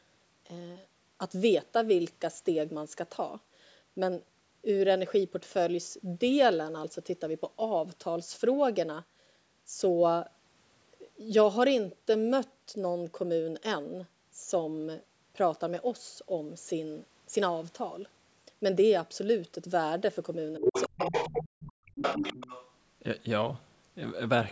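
From 20.59 to 22.22 s the speech is likely suffering speech suppressed in double talk: dips at 20.59 to 20.69, 20.88 to 21.12, 21.28 to 22.02 and 22.2 s, some cutting out almost completely. Unlike a network dropout, the gaps follow the overlapping far voice. That other side's voice leaking through, probably from loudspeaker echo the canceller missed, sits only slightly below the speech from 20.62 to 21.48 s and 22.02 to 22.71 s.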